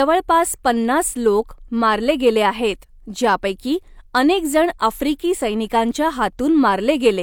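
A speech recording with nothing technically wrong with it.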